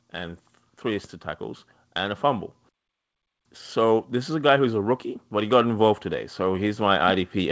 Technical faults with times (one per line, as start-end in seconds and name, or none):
5.29-7.51 automatic gain rising